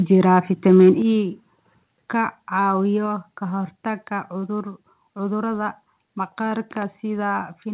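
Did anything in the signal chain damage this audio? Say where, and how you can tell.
Yes. Likely microphone overload at the converter: peaks exceeded full scale by about 1 dB at 0.33–0.39 s and about 2 dB at 0.68–0.89 s, leaving a harsh crackling edge.

Call processing likely stepped the microphone volume down, so the level drops abruptly by about 6 dB at 1.02 s, about 1 dB at 2.04 s and about 2 dB at 3.06 s.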